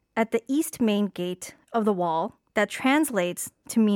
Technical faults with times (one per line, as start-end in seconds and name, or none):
none